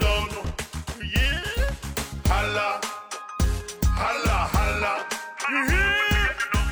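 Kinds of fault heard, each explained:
Damaged data in a compressed stream: corrupt bytes in the file make the decoder misread frames and hunt for the next header, giving a brief chirp, squawk, click or short hole from 1.54 to 1.59 s.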